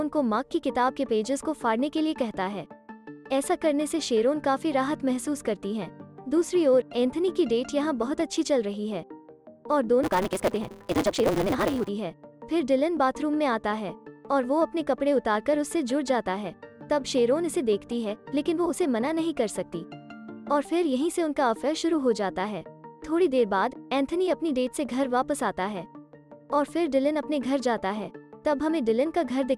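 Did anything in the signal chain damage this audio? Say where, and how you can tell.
Yes. From 10.03 to 11.89 s there is a block size mismatch (truncated) at the driver or buffer stage. A steady buzz at 188 Hz appears, and the sound runs about 1.88 times faster at roughly its normal pitch. Each block loses its tail, which fits a 256-sample read from a longer write. The waveform shows a jump every 5.3 ms, and the spectrogram shows regular vertical striations with a harmonic comb at multiples of 188 Hz.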